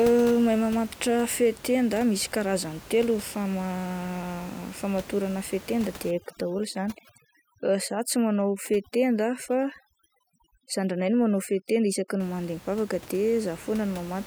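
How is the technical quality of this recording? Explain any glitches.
The speech has one clear glitch, over-aggressive noise removal, from 6.11 to 12.20 s. Before that, room noise sits about 20 dB below the speech. Across that stretch, a noise reducer cuts individual frequency bands whenever they approach its noise estimate. The room background drops and breaks up into twinkling specks. Quiet parts of the speech get removed too.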